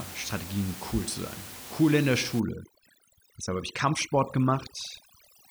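From 2.40 s, just after "in der", to the end, overdone noise removal suppresses bands near the room-noise floor, leaving twinkling near-silence.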